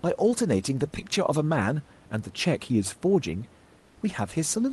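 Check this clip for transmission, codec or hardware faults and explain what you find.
One fault stands out. From 3.79 to 3.95 s the room background turns into a flat, featureless hiss about 4 dB quieter, likely comfort noise in place of the background during a discontinuous-transmission pause.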